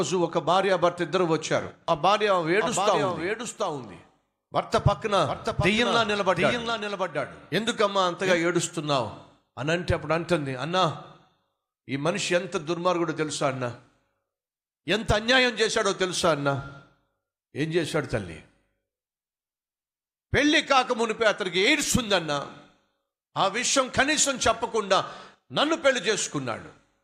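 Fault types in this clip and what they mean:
Doubled audio track: from 2.61 to 8.37 s the speech is heard twice, with a second full-band copy trailing the original by roughly 0.7 s at about 5 dB lower. The copy has no reverberant tail or room colouring, so it sounds like a clean repeat rather than an echo, and it appears and vanishes abruptly at both ends. The likely cause is the same signal reaching the mix a second time through a slower path.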